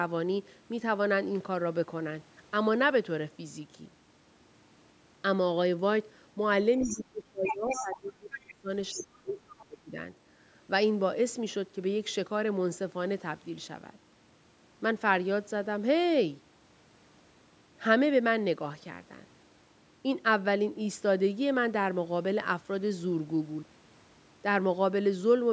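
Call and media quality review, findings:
Other side's voice leaking through: second voice at 6.79–7.02 s, 7.45–7.98 s and 8.32–8.54 s, roughly 5 to 15 dB under the talker. Likely residual loudspeaker echo left by the canceller. On a spectrogram it shows as a separate harmonic pattern.

Speech suppressed in double talk: talker level collapses at 6.79–8.69 s (drops near 30 dB) and 8.92–9.97 s (near 25 dB) while the far side speaks. The echo canceller likely attenuated both voices. On the waveform the envelope shows deep notches.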